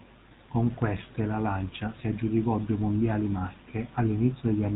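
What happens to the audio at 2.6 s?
At 2.6 s the speech carries GSM full-rate codec damage, which runs through the whole clip rather than starting there. The codec rebuilds speech from a vocal-tract model driven by sparse, regularly spaced pulses, a coarse coding that fits a 13 kbps phone channel, so the voice sounds plainly buzzy and gravelly. On a spectrogram everything stops at a hard ceiling near 4 kHz, with a flat, grainy texture below it.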